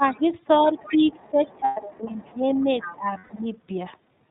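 The whole recording carries the band-limited, slightly rough and synthetic quality of the iLBC codec. Nothing above 4 kHz survives, and the coding damage is plainly audible, consistent with the 30 ms frame mode at about 13 kbps. The dullness is constant rather than coming and going, which separates it from the dips below.

From 0.0 to 0.28 s the speech is suppressed in double talk, sinking by roughly 10 dB for about a fifth of a second. This is likely an echo canceller turning down the talker while both sides spoke. A faint scrap of the other side's voice leaks through at 0.13 to 0.17 s, around 35 dB below the speech.

A longer stretch of suppression runs from 0.6 to 3.5 s, with dips of roughly 15 dB adding up to about two seconds. Through most of it, 0.79 to 3.47 s, the other side's voice leaks through at about 20 dB down. It is a second voice rather than a repeat of the talker, likely residual loudspeaker echo.

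Lost iLBC frames occur at 1.64 to 1.81 s and 3.18 to 3.31 s. Each gap lasts 120 ms, which fits four 30 ms frames. The decoder fills each one with a held, buzzy vowel-like tone instead of silence, and clear speech returns immediately afterwards.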